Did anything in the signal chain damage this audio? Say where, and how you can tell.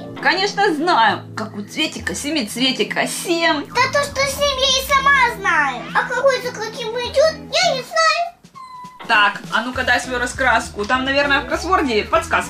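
Yes, at the codec stage. Compressed frames were skipped at 6.20 to 6.24 s. The audio jumps ahead by about one frame, roughly 50 ms, which fits a 46.4 ms frame length.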